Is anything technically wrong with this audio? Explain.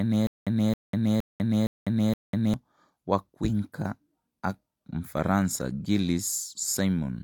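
Yes. A stutter with silent gaps runs from the very start of the speech clip to about 2.54 s. The same 270 ms fragment plays five times, each followed by about 196 ms of dead digital silence, so the burst returns every 466 ms with a steady, mechanical rhythm. This is likely a stalled player or stream that replayed its last fragment at each retry and then ran dry. The audio that belonged in those gaps is missing.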